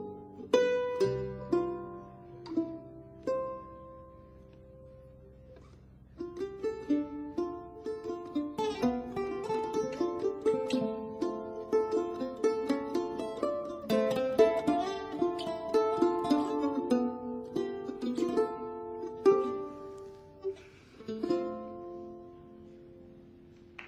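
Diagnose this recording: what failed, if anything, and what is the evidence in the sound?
Nothing in the signal chain has failed: the audio runs continuously with no dropouts, distortion, level jumps or other audible disturbances at any point.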